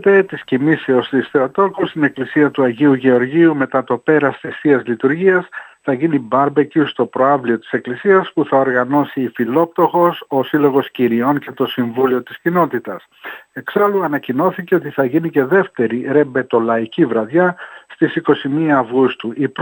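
From 8.94 s to 15.54 s the audio carries crude rate conversion. The sample rate was raised by a ratio of 1.5, which fits a move from 32 kHz to 48 kHz. Samples were simply repeated to fill the gaps, with no filtering. That leaves a repeating error pattern that produces tones unrelated to the sound. It sits roughly 30 dB below the signal. It is heard as a gritty, inharmonic fizz that rides on the louder and brighter moments.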